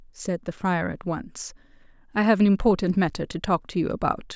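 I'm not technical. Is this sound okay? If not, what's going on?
Yes, nothing stood out as wrong when listening to this recording.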